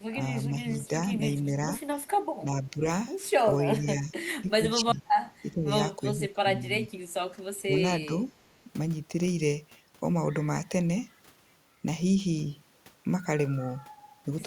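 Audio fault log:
0.11–1.69, 2.41–2.85, 3.6–5.7, 6.15–6.99, 7.32–7.74 and 8.06–8.13 s: speech suppressed in double talk. The speech ducks by a few decibels up to about 20 dB, likely because the echo canceller mistook it for echo. These dips show as pinched waveform envelope and thinned spectrogram energy.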